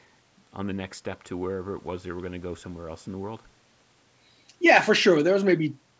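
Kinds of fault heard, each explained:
No faults turn up here; the speech has simply gone through a call's microphone processing, which trims the lowest bass and leaves nothing above 8 kHz, and that's just how such a path normally behaves.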